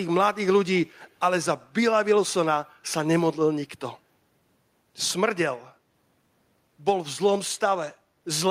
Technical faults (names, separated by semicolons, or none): echo leak